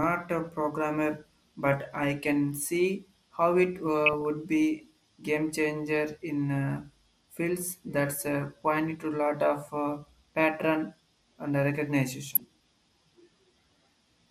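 Throughout the speech there is plainly audible MP2 compression. The sound is dull and carries a gurgling, granular texture, most likely from MPEG Layer II coding at a rate that fits around 80 kbps. With so few bits, the upper sub-bands are dropped or switched on and off from frame to frame, and the remaining bands are coarsely quantised. A spectrogram shows a ragged ceiling on the high frequencies, with blocky patches that appear and vanish.

DAB burbling breaks in at 4.06 to 4.25 s, again at 9.03 to 9.12 s, and at 12.27 to 12.40 s. Here bit errors got past the error correction and corrupted samples, putting short blips of noise in single sub-bands. The result is burbling noise over the speech. The first burst is the longest, spanning what sounds like around ten frames. On a spectrogram, each burst shows as isolated bright horizontal bars in individual bands. On the waveform, it shows as short, spiky bursts of level.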